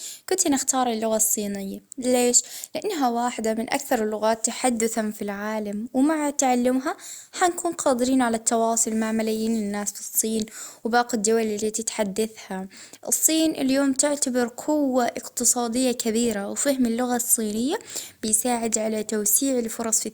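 No technical faults can be heard anywhere in the speech recording. Nothing in it calls for a timestamp or a closer look at any point.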